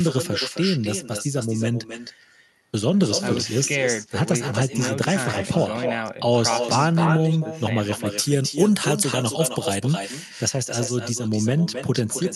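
From the first second to the end, the speech carries an echo with no canceller. The far end evidently plays the call through a loudspeaker, its microphone picks the sound up again, and nothing subtracts it before it returns. Each phrase is shadowed roughly a third of a second later by a thinner copy about 8 dB down. Unlike room reverberation, which smears continuously into the tail, this is a distinct, delayed repeat.

From 8.06 s to 10.39 s, pre-emphasis is left on: the treble lift meant to be undone at playback was never reversed. Highs sit about 10 dB stronger at 10 kHz than at 1 kHz, a rise that fits a 50 µs FM curve, so sibilants hiss and the sound turns thin and bright. Because the coloration switches on and off while the echo persists, it stands apart from the call path's own top end, which stops near 12 kHz, as an Opus stream at 64 kbps would.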